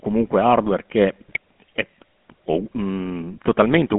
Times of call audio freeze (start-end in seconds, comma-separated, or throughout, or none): none